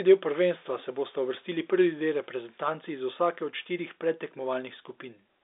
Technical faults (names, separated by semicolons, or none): none